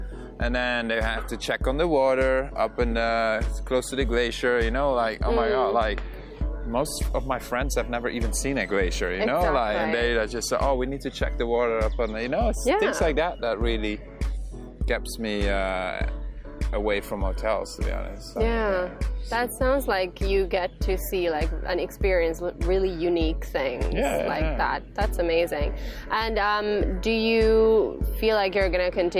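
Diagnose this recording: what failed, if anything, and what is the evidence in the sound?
Nothing failed in this recording, and the sound gives no evidence of any fault.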